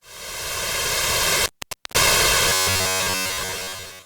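Intermittent contact appears from 1.38 to 2.03 s. A plug or cable momentarily loses its connection, breaking the signal path. The sound drops out for roughly 0.49 s of that span, with a sharp crackle as the contact opens and again as it closes. While the line is open, only a faint residual hiss remains, so there is a gap in the audio rather than a smooth fade.

Robotic sound from repeated short buffers takes over from 2.49 s to the end at 4.06 s. Fresh audio arrives too rarely, and the gap is filled by replaying the most recent fragment again and again, most likely a playback buffer starved of data. Those loops impose a steady buzz at 93.8 Hz, which fits a buffer of about 10.7 ms. Most of this stretch is repetition, so the sound turns metallic and rigid while only loosely tracking the original.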